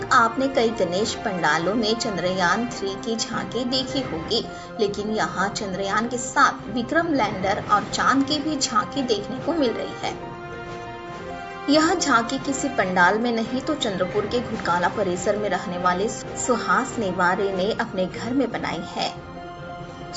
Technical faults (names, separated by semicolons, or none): none